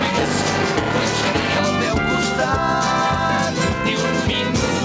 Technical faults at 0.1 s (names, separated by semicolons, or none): buffer tearing